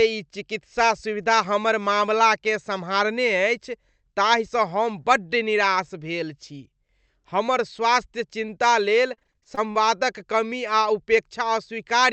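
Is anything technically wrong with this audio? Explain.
Yes. Between 8.79 and 9.83 s there is repeated packet loss (robotic sound). Packets went missing or arrived late in quick succession, and each hole was patched by extending the previous sound before the next dropout hit. Roughly a fifth of that stretch is concealed, the longest single gap is about 41 ms, and about 200 ms of audio is lost in total. The result is choppy speech with fragments missing. The call path's top end stops around 8 kHz, consistent with an Opus wideband setting.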